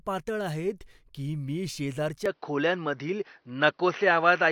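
From 2.26 s the speech turns dull, likely an input switched to a poorer device; the spectrogram empties above 6 kHz and waveform level steps by about 5 dB.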